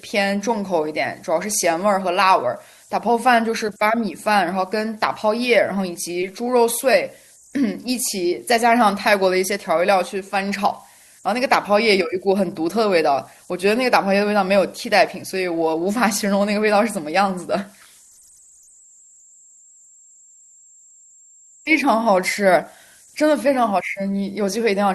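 Converter idle tones run through the whole clip: a faint whistle around 7 kHz sits in the pauses between phrases, and under the quieter stretches of speech it turns into a grainy hiss. The error stays about 34 dB below the signal. It comes from a delta-sigma converter working without dither. When the input is very small, the modulator settles into repeating bit patterns, and those cycles come out as stray tones whose pitch follows the input's DC offset.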